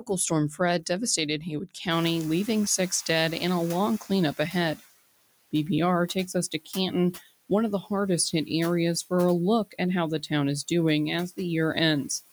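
A speech recording in which the room's background noise jumps by about 22 dB at around 2 s. Noise suppressor catching up: from 1.9 to 4.82 s the suppressor's noise estimate lags that rise, so the louder background passes through, then sinks by about 11 dB over 2.92 s. Speech cut by the noise suppressor: between 6.51 and 6.76 s the suppressor mistakes parts of the speech for noise, dipping them by up to about 12 dB for roughly a tenth of a second, so they sound faint or swallowed.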